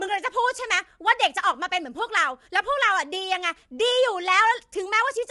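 From start to finish, the speech carries low-delay AAC compression. The damage is plainly audible. The voice sounds rough and grainy, with noise filling the gaps between pitch harmonics. Nothing is present above 11.6 kHz, so the top band is missing. The cause is likely AAC-ELD, the low-delay coder of video calls. At a low bitrate its frequency lines are coarsely quantized, which lets noise fill between the harmonics. The damage fits a bitrate near 32 kbps.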